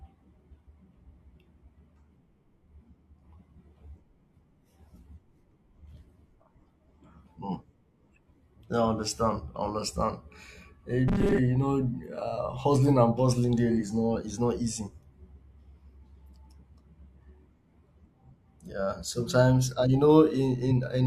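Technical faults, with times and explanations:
2.16, 5.14–5.18, 13.76–13.78 (right after "hustling and bustling"), 15.55–15.60 and 20.67–20.72 s, compressed frames skipped: the audio jumps ahead about 100, 150, then 40 ms each time, which fits dropped 42.7 ms codec frames.
11.08–11.39 s, robotic sound from repeated short buffers: a stiff, metallic 200 Hz buzz runs through most of this stretch, likely from a 5 ms chunk replayed while fresh audio ran late.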